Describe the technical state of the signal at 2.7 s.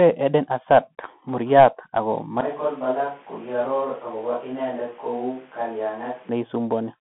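At 2.7 s the signal carries two faults at once. Throughout the clip the speech passes through the Bluetooth CVSD headset codec. This codec codes each sample as a single up-or-down bit and adapts its step size, which fits a 64 kbps link. Nothing reaches above 3.8 kHz, and the band sits roughly between 150 Hz and 3.4 kHz. The damage is plainly audible: a granular hiss lies under the speech, s sounds turn scratchy, and loud bright passages distort where the step cannot keep up. Plain lowpass filtering gives a dull but clean sound. This sound is gritty, not just dull.

The moment also falls inside a span from 2.41 s to 6.29 s where the speech turns hollow and roomy, loses low end, drops about 10 dB in level, and gains background noise sitting around 25 dB below the speech. The change in and out is abrupt. This is likely a switch to a distant microphone after the close one dropped out. Added reverb would leave the level and bass intact. 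Here the body, loudness and noise floor all change together at a hard edge.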